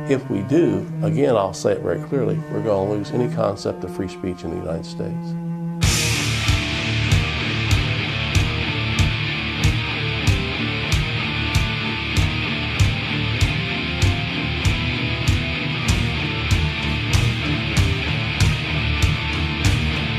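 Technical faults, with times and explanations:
No technical faults can be heard in the signal at any point.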